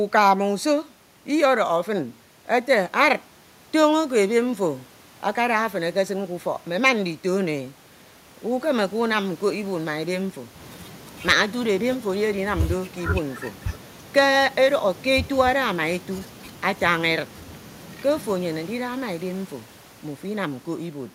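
No technical faults can be heard anywhere in the recording. The speech comes through with nothing in the signal that calls for comment.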